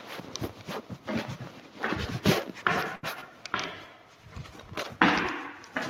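At 2.95 to 3.05 s, a short stall from a late packet holds the sound for about 76 ms. It shows on a spectrogram as flat, smeared bands, then resumes 76 ms later without loss. At 3.21 to 3.24 s, short concealed packet loss fills about 9 ms with extrapolated sound, heard as a brief smear or wobble and visible as a blurred slice in the waveform. From 3.33 s to the end, a call bitrate drop takes the encoding from 64 to 21 kbps, lowest for about 1.5 s. The sound turns rough and muffled, and the spectrogram loses its high-frequency energy above a sharp ceiling.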